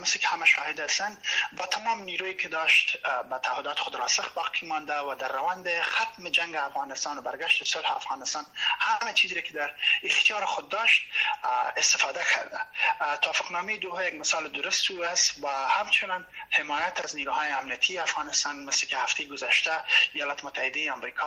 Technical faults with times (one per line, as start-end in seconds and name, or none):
none